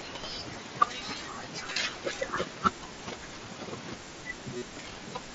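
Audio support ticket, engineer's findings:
Buzzy, steady tone replacing the audio at 1.73 s for about 30 ms and at 4.57 s for about 45 ms, with a slight warble as normal sound resumes. Concealed Bluetooth headset packet loss. Each gap points to a short run of consecutive lost frames, longer at 4.57 s. The receiver filled the gaps by looping the closest-matching recent waveform at full level, not silence. Link runs over the wideband mSBC headset codec, with audio capped near 8 kHz.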